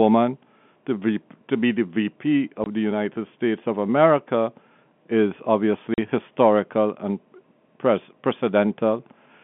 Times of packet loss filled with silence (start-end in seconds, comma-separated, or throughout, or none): 2.64-2.66, 5.94-5.98